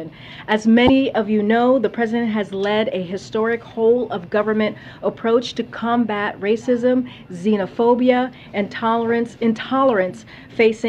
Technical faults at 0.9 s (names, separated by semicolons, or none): damaged data in a compressed stream